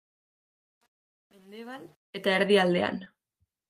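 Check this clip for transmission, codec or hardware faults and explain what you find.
Two faults turn up: a gritty fade-in and a brief dropout near the end.

From 0.0 to 2.39 s, the fade-in shows truncation distortion. It's worst up to 1.99 s, where the quiet audio turns gritty and steppy. That fits a gain stage keeping only about 9 bits with no dither.

Around 3.05 to 3.08 s, there's short concealed packet loss. About 20 ms went missing, and roughly 15 ms was patched by extending the previous sound, leaving a quick smear or wobble.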